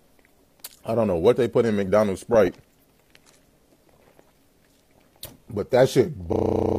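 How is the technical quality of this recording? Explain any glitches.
The recording has four bursts of DAB burbling, at 0.37–0.70 s, 2.18–2.48 s, 4.07–4.20 s and 6.07–6.31 s. Bit errors slipped past error correction into the MP2 data, so corrupted samples put short noise blips into single sub-bands and corrupted scale factors made sub-bands jump in level for up to a frame. The result is short noise blips and level jumps laid over the sound.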